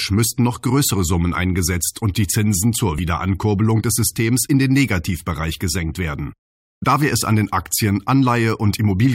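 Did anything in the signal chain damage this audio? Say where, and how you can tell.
Yes. At 2.98 s the speech is broken by a brief glitch of about 10 ms. That points to the codec stage, specifically damaged data in a compressed stream. Bytes of the encoded file were corrupted there. The decoder misread the affected frame, lost sync, and searched for the next frame header. It then resumed at the next valid frame header.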